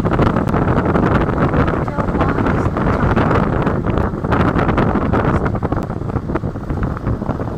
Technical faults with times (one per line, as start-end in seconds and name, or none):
0.48 block of digital silence
4.02 block of digital silence
5.82 block of digital silence